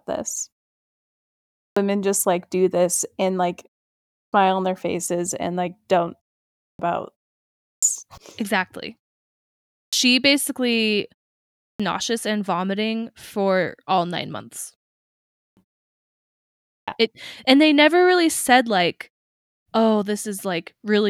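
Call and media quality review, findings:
Speech onsets cut off after pauses: each phrase starts abruptly out of silence, first sounds missing, about 0.3 s lost (295 to 346 ms). At 1.46, 4.0, 6.46, 7.53, 9.63, 11.5, 15.23, 16.53 s, after gaps of 0.33 to 1.01 s. Clipped start after a pause: output device sleeps during silence, then needs roughly a third of a second to wake or relock, swallowing each onset.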